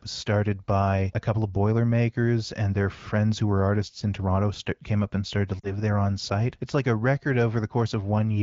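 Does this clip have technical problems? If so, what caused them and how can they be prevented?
Yes. Between 5.59 and 5.73 s there are lost AMR speech frames. Radio errors corrupted the frames, so the wideband decoder concealed the gap by repeating the last good pitch and vocal tract settings at falling gain. About 40 ms of sound is missing, which fits two dropped 20 ms frames. It is heard as a brief dip that falls toward near silence, and the voice returns weak or rough for a moment. On a spectrogram, the harmonics go flat and frozen before their energy fades. The waveform envelope dips there. Stronger radio coverage or better channel coding would prevent these frame losses.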